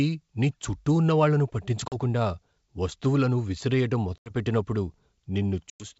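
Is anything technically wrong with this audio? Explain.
Yes. Packet loss on an ADPCM call causes three hard-edged holes: one at 1.88 to 1.95 s just after "నీ చుట్టూ ఉన్న వాళ్ళను" (40 ms lost, likely a couple of packets), one at 4.18 to 4.31 s after "వస్తువులను విసిరేయడం" (80 ms, about four packets), and one at 5.70 to 5.85 s (100 ms, about five packets). Lost packets are filled with silence, and the receiving decoder's adaptive predictor and step size drift from the sender's. Speech therefore resumes with brief slight distortion until the two sides resynchronise. The wideband G.722 coding carries clear speech up to about 7 kHz.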